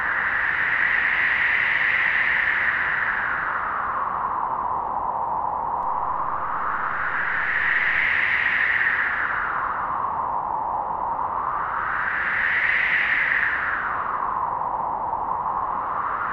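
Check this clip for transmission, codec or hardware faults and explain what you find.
There's one fault here, a DC step. At 5.83 s the waveform's zero line jumps by about -34 dBFS, as if an offset input got switched in, then steps back at 8.05 s. Each shift gives a low thump, while the sounds carry on untouched.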